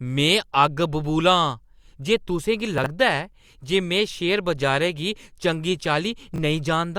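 At 2.78 s there's a brief jumbled moment in the speech, running to 2.86 s, caused by chunks out of order. A short slice of audio got written late and plays after material that should have come after it. Judging by the span, that's one 20 ms chunk landing about three chunks behind where it belongs. Nothing goes missing, but the scrambled order and the hard joins around the misplaced piece give a garbled flick. The same thing recurs at 6.34 to 6.38 s, shorter this time. It sounds like a single chunk swapped with its neighbour, a quick stumble.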